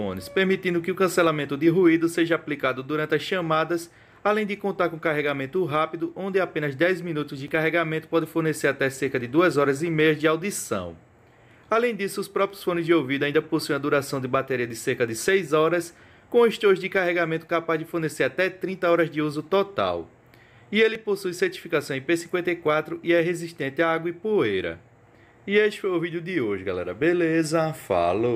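Dropped buffer (overrun) at 7.48 s and again at 20.95 s: each is heard as a brief jump where the sound skips forward without any gap of silence. About 5 ms of audio goes missing each time, and the two sides of the missing piece are butted straight together, which produces the discontinuity. The likely cause is the recording program failing to read its samples before the hardware overwrote them, so that short block was lost.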